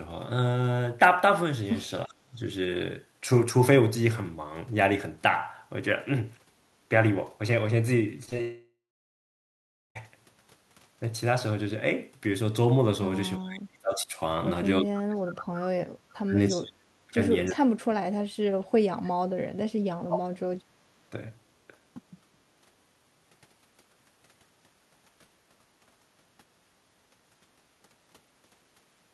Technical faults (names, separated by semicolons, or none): speech suppressed in double talk; short concealed packet loss; long network dropout; echo leak